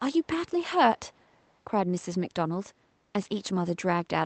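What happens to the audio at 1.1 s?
An echo leak runs from 0.98 to 1.53 s. A very faint copy of the speech returns about 0.39 s late, likely because a loudspeaker's echo canceller let some pickup through. A spectrogram shows weak harmonic traces trailing the originals by that delay.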